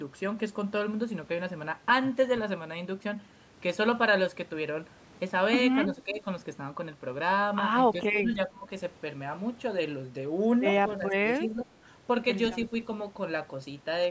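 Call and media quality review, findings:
Speech dips at 5.86–6.25 s (mild, about 5 dB), 7.93–8.68 s (deepest, about 15 dB) and 10.98–11.7 s (about 10 dB). Speech suppressed in double talk: likely the echo canceller ducking the near talker along with the echo.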